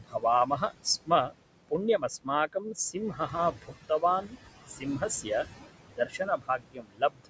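Noise suppressor artifacts run through the whole clip. Steady room noise, sitting about 12 dB under the speech, is pulled down by about 19 dB between phrases and returns beneath them. This is a pumping of the background, not of the speech itself.

Speech cut by the noise suppressor then comes in four spans: 0.0–1.35 s, 1.69–4.37 s, 4.69–5.46 s and 5.85–7.3 s. Within these, parts of the speech were mistaken for noise and turned down by up to about 21–22 dB, or about 13 dB in the third span. This adds up to roughly half a second, about a second, a brief moment and about a second. The affected parts of the speech sound swallowed and faint rather than dropping to silence, which distinguishes this from a dropout.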